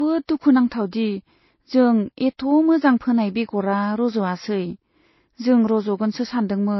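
Throughout, the speech is dull, with nothing above 5.8 kHz and mixed artefacts, likely from transcoding between lossy codecs, pointing to low-bitrate MP3 re-encoded twice.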